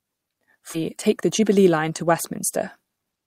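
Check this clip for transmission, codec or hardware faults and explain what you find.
Two transmission faults are present: one skip ahead and two stretches of jitter buffer speed-up.

At 0.73 s there is a skip ahead. Roughly 0.7 s of speech was dropped, either in transit or by an overflowing jitter buffer, while later audio was already queued. Nothing fills the gap, so the speech on either side is spliced almost directly and playback lurches forward.

Jitter buffer speed-up runs from 0.89 to 2.12 s at 111% speed and from 2.75 s to the end at 115%. The buffer held more audio than its target, so the receiver repeatedly cut short pitch-period segments, removing roughly 150 ms and then roughly 100 ms. The speech sounds hurried at an unchanged pitch.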